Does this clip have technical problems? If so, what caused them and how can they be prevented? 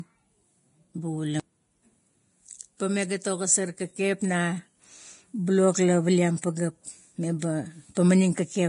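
Yes. The whole speech clip has heavy Vorbis compression damage: hissy, grainy treble and roughened tones, with nothing above 10.6 kHz. That's likely a low-bitrate Vorbis encode, something around 30 kbps, where the codec quantises the residue so coarsely that fine detail turns to noise. To prevent it, encode at a higher quality setting or keep a lossless master.

There's also a short pre-echo at about 6.42 s, between "blok la paliam" and "pageap me". The quantisation noise spreads across the transform block, so a hiss of about 19 ms lands just before the attack and softens it. A higher bitrate, or an encoder that switches to short blocks on transients, would avoid it.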